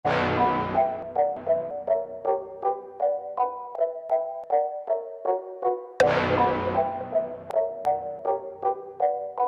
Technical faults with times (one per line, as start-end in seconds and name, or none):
1.02-1.71 chunks out of order
3.75-4.44 chunks out of order
7.51-8.19 chunks out of order